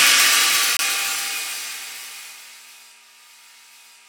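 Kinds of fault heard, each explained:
Corrupt frame muted: the sound drops abruptly to silence from 0.77 to 0.81 s, about 42 ms, consistent with one damaged compressed frame rejected and blanked by the decoder.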